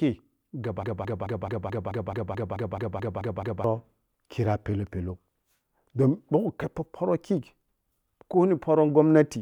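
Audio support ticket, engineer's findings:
Broken-record loop, 0.83–3.64 s: a 216 ms fragment of speech stutters back to back, 13 repeats, then normal playback resumes. Likely cause: player or stream stalled and re-sent its last held buffer. Speech meant for that span is lost.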